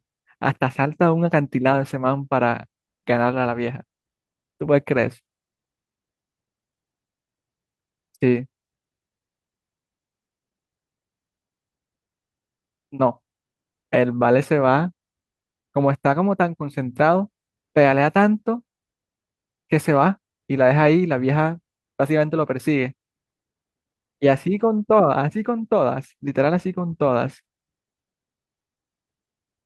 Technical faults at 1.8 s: none

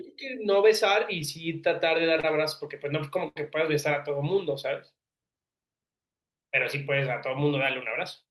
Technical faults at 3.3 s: short stall from a late packet

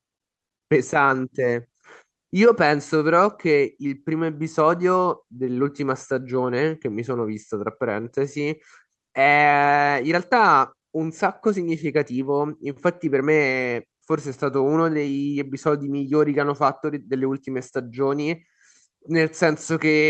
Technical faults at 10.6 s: clock drift between sender and receiver; repeated timing corrections

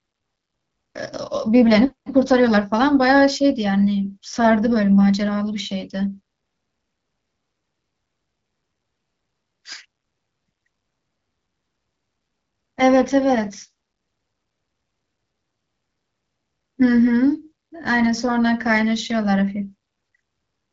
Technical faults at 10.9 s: none

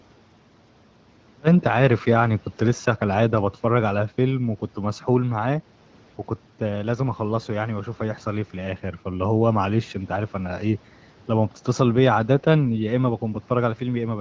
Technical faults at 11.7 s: none

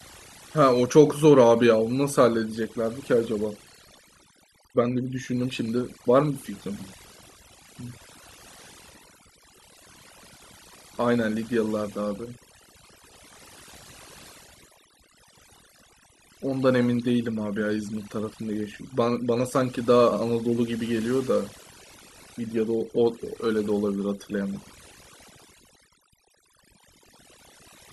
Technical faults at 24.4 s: overdone noise removal

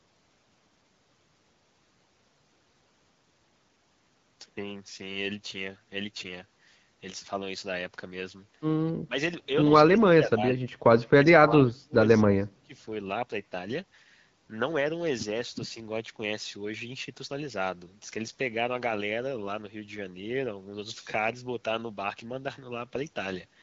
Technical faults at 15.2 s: none

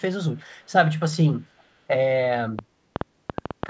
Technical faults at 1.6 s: echo leak

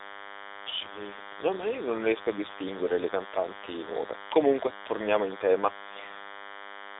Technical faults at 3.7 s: DECT cordless phone buzz; AMR narrowband mobile codec

